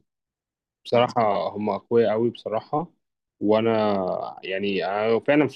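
A speech clip with one skip at 1.36 s. A short piece of audio, about 50 ms, is gone. The two sides meet with no gap. This is likely audio missing between chunks, lost while one 2.0 s chunk closed and the next opened.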